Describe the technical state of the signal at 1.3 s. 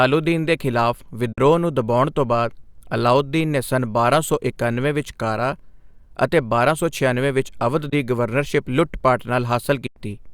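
A Bluetooth dropout runs from 1.33 to 1.38 s, a gap of about 46 ms in which the speech drops out to silence. The likely cause is audio packets failing to reach the headphones in time and being discarded, which leaves nothing to play until good packets arrive again. The length of the gap fits roughly two lost packets. When sound returns, the speech picks up further along, as though it had kept playing through the hole.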